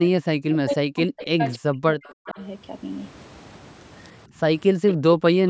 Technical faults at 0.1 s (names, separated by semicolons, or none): echo leak; speech suppressed in double talk